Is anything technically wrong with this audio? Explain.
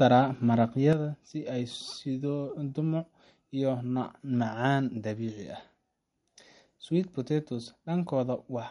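Yes, there are two problems here.

Throughout, the speech sounds watery and swirly, with nothing above about 11.1 kHz. That's the signature of MP3 compression, likely at a low bitrate around 48 kbps: the encoder runs short of bits, chops the top end, and lets weak frequency detail flicker between frames.

At 0.93 s there's a sudden gain jump. The level drops by about 7 dB in one step and stays down to the end, taking the background noise with it, likely a digital gain change applied instantly with no ramp.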